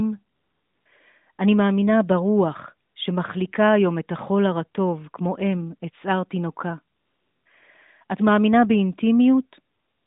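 The phone's voice activity detection judged the talker silent four times and stopped sending speech frames, so the receiver filled each gap with AMR comfort noise generated from a rough level and spectrum estimate. This happens from 0.36 to 0.86 s, briefly from 2.88 to 2.96 s, from 6.96 to 7.46 s, and from 9.74 s to the end. The real background drops out and is replaced by a smooth, steady hiss that switches in and out. Within the 150 Hz to 3.7 kHz line band, the surrounding speech carries light AMR narrowband mobile codec colouring, which fits the 12.2 kbps mode.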